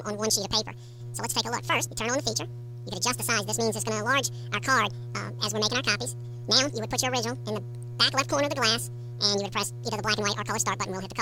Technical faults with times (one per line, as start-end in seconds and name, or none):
0.00-11.21 audio read two samples at a time (double speed)